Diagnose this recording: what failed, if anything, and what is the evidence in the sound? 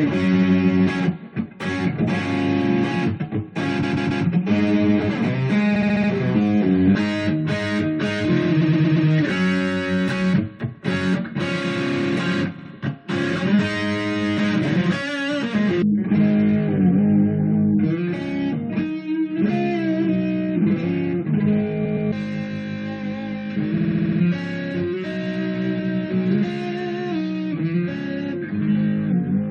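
Repeated frames at the codec or storage stage. Blocks of 70 to 140 ms replay two to six extra times, stuttering at 3.82, 5.75, 8.60, 12.57, 21.84 and 23.77 s. Each burst lengthens the audio by up to about half a second.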